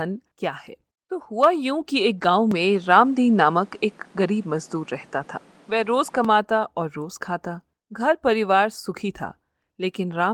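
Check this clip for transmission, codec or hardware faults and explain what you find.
Two faults turn up in this speech clip: a brief patch rebuilt from error-correction data, and a stretch where the input sounds as though it moved to a poorer device.

From 2.17 to 2.23 s there is a lost packet rebuilt from error correction. Two packets went missing, and the decoder filled about 40 ms from the low-bitrate copies carried in the packets that followed. The audio never drops out. The frames just turn briefly grainy and noisier. That continuity separates it from plain packet loss concealment, which smears or fades across the gap instead of playing real, if coarse, content.

From 2.51 to 6.25 s the character shifts in a way that is likely an input switched to a poorer device. Everything above about 11.4 kHz vanishes, and a new background noise appears, sitting roughly 30 dB under the voice. The switch has no silence, and the level holds steady. 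A codec dropping to a narrower band would trim the top but leave the noise floor alone. The fresh noise and changed tone point to different hardware.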